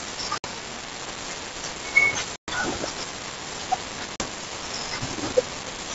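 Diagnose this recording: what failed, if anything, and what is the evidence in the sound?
Network packet loss on an ADPCM call: silent holes of 60, 120 and 40 ms at 0.38, 2.36 and 4.16 s, each followed by decoder predictor mistracking.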